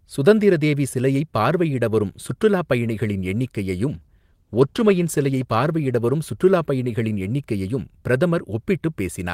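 From 3.91 to 7.25 s a call bitrate drop, fitting a fall to 16 kbps, makes speech coarse and muffled; unlike packet loss, nothing cuts out.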